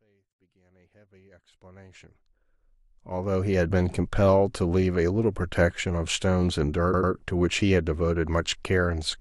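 After the smooth fade-in ending at 3.75 s, repeated frames occur at 6.93 to 7.12 s. An 85.6 ms block, fitting a short run of compressed frames, plays twice more, stuttering and adding 0.19 s.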